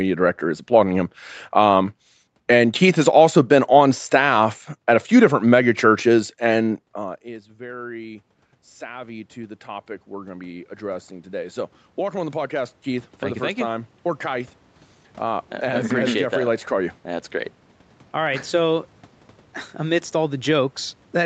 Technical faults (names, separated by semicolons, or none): automatic gain rising